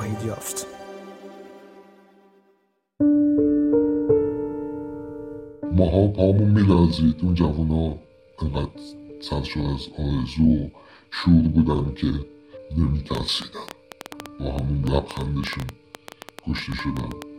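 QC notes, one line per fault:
13.15–17.23 s, train of clicks: a rapid ticking of sharp, similar-sounding pops at about 8.35 per second, unevenly spaced, some forty in all. The pops stand well above the sound, roughly 10 dB over it, and sit on top of everything to nearly the end of the clip. Near-identical impulses at an uneven pace are likely interference from nearby equipment or a faulty connection or power supply injecting pulses into the signal path.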